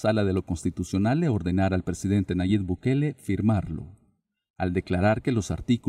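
No technical faults can be heard anywhere in this audio. Nothing in it calls for a repair or further investigation.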